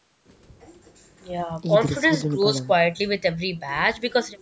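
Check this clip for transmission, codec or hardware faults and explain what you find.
Nothing stood out on listening to this speech clip; the only processing heard is ordinary call microphone processing, which trims the lowest bass and carries nothing above 8 kHz.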